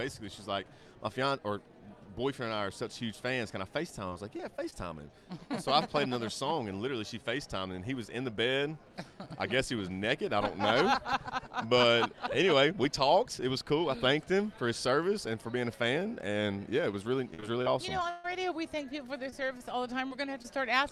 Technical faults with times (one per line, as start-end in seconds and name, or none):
4.09-4.74 repeated packet loss (robotic sound)
17.34-18.26 repeated packet loss (robotic sound)
19.30-20.46 scattered short gaps